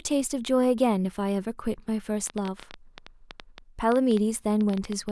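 From 2.27 s to 5.10 s a train of clicks rides over the speech: around thirty near-identical pops at about 8.5 per second, unevenly spaced, peaking a few dB above the signal, likely from electrical interference or a faulty connection. Unlike random crackle, the clicks keep one shape and continue through pauses.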